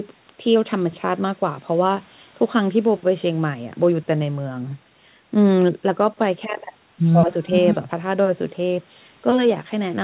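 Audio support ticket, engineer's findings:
Findings: no faults; the speech is band-limited to 4 kHz, as expected for G.711 mu-law on the WebRTC call path.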